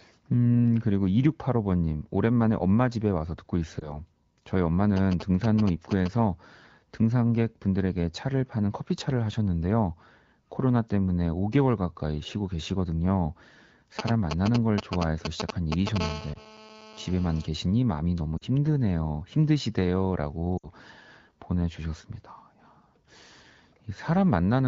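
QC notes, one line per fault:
3.80 s, 16.34 s, 18.37 to 18.44 s and 20.58 to 20.70 s, lost AMR speech frames: Radio errors corrupted frames, so the AMR-WB decoder, running at 12.65 kbit/s, replayed the last good pitch and vocal tract settings at falling gain. The gaps at 3.80 and 16.34 s are about 20 ms, fitting one lost frame, and are heard as a brief dip or warble. The 40 ms and 60 ms runs stretch the sound and fade it quickly before it returns weak or rough. Unlike the interference, each event is a smear of the speech itself, with no added buzz.
4.97 to 6.08 s and 13.99 to 15.98 s, GSM signalling bursts: A nearby 2G phone was signalling, sending only short groups of radio bursts that the audio circuit rectified into a galloping dit-dit-dit of short 217 Hz buzzes. The first run sits well below the speech. The second is roughly as loud as the speech. It differs from the steady phone buzz because it is broken into clustered stutters, not continuous.
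16.00 to 17.46 s, GSM phone buzz: Here the nearby phone is in a call and transmits bursts 217 times a second without a break. The rectified pulses give a hard, raspy, harmonic-rich 217 Hz buzz about 14 dB below the speech, unrelated to what is said. It differs from the signalling bursts because it holds nearly steady with no galloping rhythm. The lost frame at 16.34 s dips or warbles the speech underneath it.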